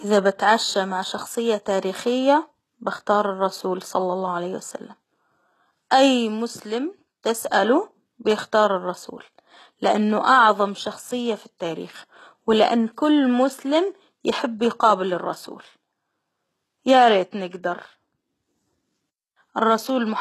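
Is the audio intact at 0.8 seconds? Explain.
No. At 0.8 seconds the speech already carries heavy compression damage, present throughout the clip, likely from HE-AAC compression. Nothing sounds above 12.3 kHz. The treble is rebuilt from copied lower bands, so s sounds turn gritty and lispy. This fits a very low bitrate around 16 kbps.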